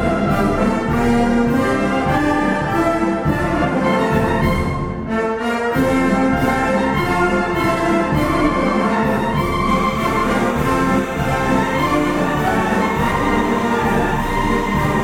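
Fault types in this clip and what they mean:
Timecode bleed: from 9.69 s to the end, a steady chirping warble sits about 20 dB under the sound, flipping between pitches near 1 and 2 kHz. Linear timecode from a neighbouring track or cable is leaking in, and its rhythm fits 30-frame code.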